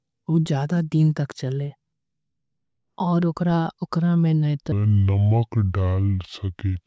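From 4.72 s to the end at 6.86 s, the samples are played back slower than they were captured, with no rate conversion. That is a wrong sample rate, consistent with 24 kHz audio played at 16 kHz. The speech slows to two-thirds speed and drops 7.0 semitones, sounding low and dragging.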